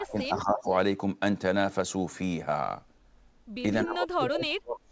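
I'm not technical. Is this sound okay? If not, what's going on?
No. The speech is turned down at two points, from the start to 0.71 s and from 3.83 s to the end. This is likely speech suppressed in double talk: the call's echo canceller heard both sides at once and lowered this talker too. The first dip is moderate; the second is much deeper.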